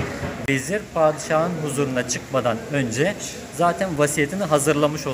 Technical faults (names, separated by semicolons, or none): block of digital silence